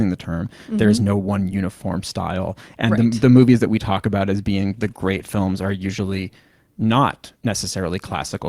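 A call bitrate drop runs from 4.64 to 6.35 s, right after "we talk about as". The call's bandwidth estimate fell, so the encoder coded the speech far more coarsely, consistent with a fall from around 64 to 17 kbps, held for about 1.6 s before recovering.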